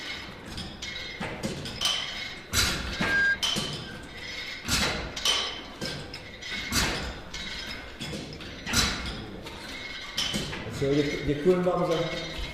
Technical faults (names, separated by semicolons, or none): loudspeaker feedback squeal